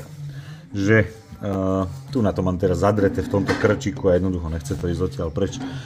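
At 1.53–1.55 s and 4.79–4.81 s, chunks out of order: a 10 ms chunk plays one slot late, swapping its position with its neighbour, causing a brief jumbled moment.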